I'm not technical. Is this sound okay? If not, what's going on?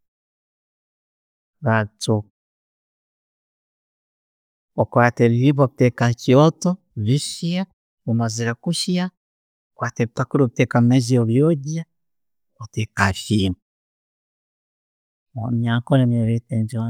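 Yes, the recording has no technical problems that a listener would notice.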